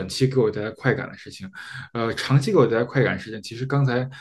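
No technical fault can be heard anywhere in the speech recording.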